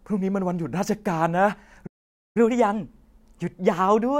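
At 1.86 s the speech cuts to silence for 0.49 s, until 2.37 s, a playback stall, likely from the player running short of buffered data or being blocked. From 2.37 s to the end, catch-up at higher speed plays the backlog at 1.1 times normal rate, so the voice sounds hurried and about one and a half semitones higher.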